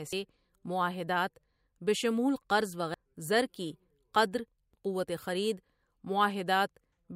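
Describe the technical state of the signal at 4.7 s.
At 4.74 s, just after "کی قدر", damaged data in a compressed stream makes the decoder lose frame sync, producing a brief chirp, squawk, click or short hole.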